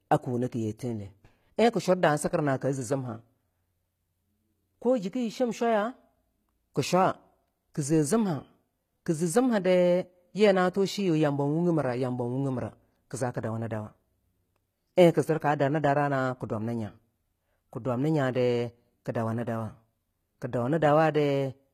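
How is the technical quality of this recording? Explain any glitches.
The recording has a clear codec problem and one small timing glitch.

Throughout the speech, the top end sounds synthetic. Nothing is present above 14.9 kHz, and the treble that remains has that gritty, metallic sheen, with sibilants turning lispy. That points to HE-AAC compression, likely at a bitrate around 20 kbps. The codec keeps only the lower spectrum and fakes the highs by copying lower bands upward, so the harmonics up there don't line up with the real ones, and the damage is plainly audible.

At 14.96 s there's a pre-echo: a brief hiss about 14 ms long just ahead of a sharp attack, which blurs its onset. The codec spreads quantisation noise across a whole transform block. When a loud transient lands late in that block, noise sized for the loud part leaks into the quiet moment before it, and you hear a short hiss arriving early.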